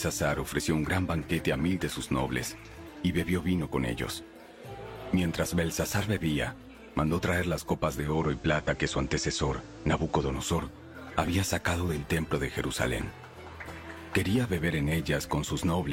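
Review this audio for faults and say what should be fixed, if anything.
At 7.98 s the sound blends from digital radio to analogue FM, and it returns at 10.48 s. Each cross-fade takes about 208 ms. The receiver lost the digital stream and fell back to the FM broadcast of the same station. Hiss rises to roughly 30 dB below the signal. The level shifts by about 2 dB. To prevent it, improve reception or disable automatic blending during capture.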